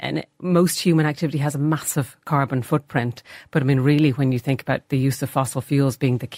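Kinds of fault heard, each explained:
No kinds of fault are heard in this speech.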